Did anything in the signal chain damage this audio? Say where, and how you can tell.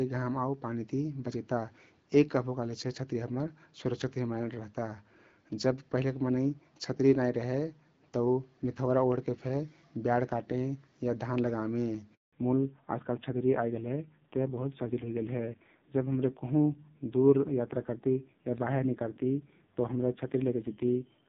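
Yes. The handover gap at 12.15 to 12.33 s is a network-stage fault. The speech fades out within a few tens of milliseconds and leaves about 180 ms of silence before sound resumes. During a handover between networks, no speech frames reached the receiver while the call was being moved to the new link. The decoder had nothing to play, so whatever was said in that interval is lost.

The fallback to narrowband from 12.33 s to the end, at 21 s, is a codec-stage fault. Before the gap, the speech carries the wideband AMR-WB (HD Voice) character, with only light coding damage. After it, nothing remains above 4 kHz, and the speech turns dull and rough. That points to the call renegotiating down to a low-rate narrowband codec, consistent with AMR-NB at around 5.9 kbit/s, which cannot carry the upper band.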